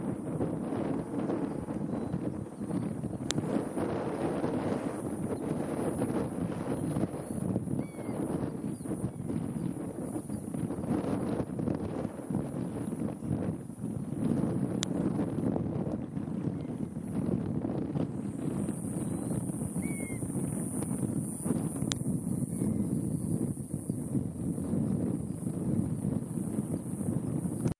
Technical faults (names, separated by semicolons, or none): file header played as audio